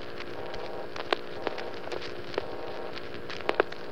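No audible technical faults.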